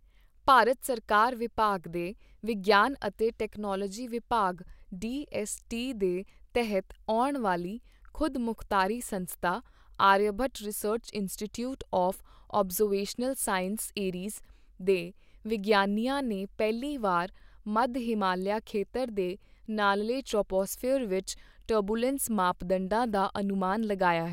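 No audible technical faults anywhere in the speech recording.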